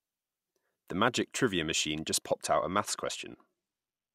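From 2.43 s to the end, a Bluetooth SBC bit pool drop sets in: the link falls back to far fewer bits per frame, consistent with the bit pool halving from 28 to 14 (about 108 kbps). The upper sub-bands starve, so the speech loses its treble and turns gritty with quantisation noise.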